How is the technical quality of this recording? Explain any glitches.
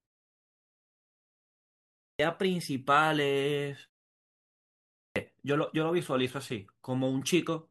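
The recording has a clipped start after a pause, twice. At 1.58 s, after about 1.6 s of silence, the first 0.61 s is missing. At 4.6 s, after a 0.79 s pause, 0.56 s vanishes. The output device dozes in silence and is slow to wake, so speech jumps in abruptly, missing its opening sounds.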